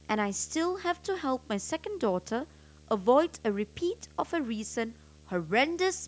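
Speech carrying video or display buzz from start to finish: a 75 Hz field-rate buzz with hash above it, sitting well below the speech, from a screen or video cable coupling in. A spectrogram shows steady lines at 75 Hz and its harmonics throughout.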